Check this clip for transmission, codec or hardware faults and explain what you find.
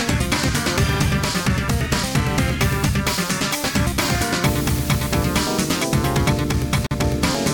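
One fault is audible, a gap at a join of encoded pieces from 6.87 to 6.91 s. The pieces were encoded separately and joined untrimmed, so encoder start delay and last-frame padding leave a silence of about 44 ms. The continuous sound drops out with smeared edges, then resumes where it stopped.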